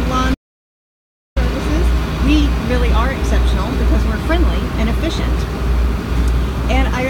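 Right from the start the audio has that grainy, gritty edge of low bit depth without dither. It sounds like roughly 7-bit resolution, likely rounded with no dither, so the error tracks the signal, with distortion sitting about 35 dB down and quiet passages getting rough.

At 0.35 s the sound cuts out completely and comes back at 1.36 s, a dropout to silence of about a second. There's no room tone at all in the gap, just silence, which points to the input likely being lost while recording carried on.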